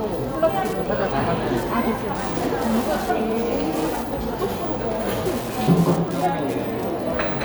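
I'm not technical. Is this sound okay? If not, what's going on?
No. There is Wi-Fi interference running through the whole clip: a steady ticking, roughly ten ticks every second, sitting quietly underneath the sound. A Wi-Fi radio near the recording or playback equipment sends a short signal every 102.4 thousandths of a second, and the circuit picks that up as a faint click. A mobile-phone buzz comes in stuttering bursts, and mains hum is a smooth drone; this is an evenly spaced tick.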